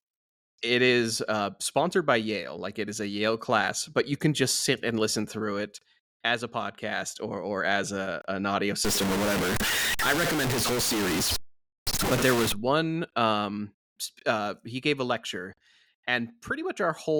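Right after "as a an audio", from 8.85 to 12.52 s, the speech turns harsh and grainy, likely low bit depth without dither: about 3 truncated bits, with distortion roughly as loud as the speech.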